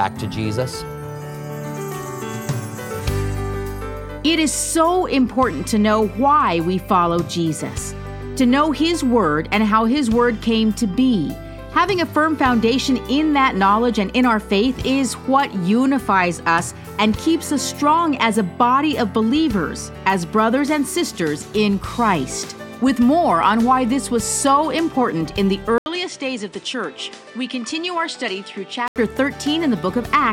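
At 25.78 s an 80 ms gap precedes duller, slightly quieter sound with a faint new noise floor, likely an input switched to a poorer device; until 28.96 s the spectrogram shows nothing above 10 kHz.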